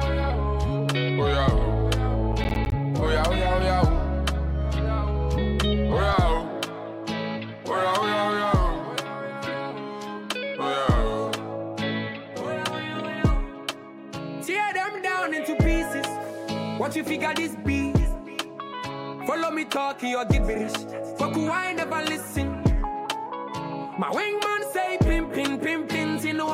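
From 2.32 to 2.72 s the audio breaks into a burst of processor overload crackle: roughly ten missed buffer deadlines, each leaving a short silent gap of around 10 ms with hard edges. The clustered, gritty run that stops cleanly separates it from one isolated dropout.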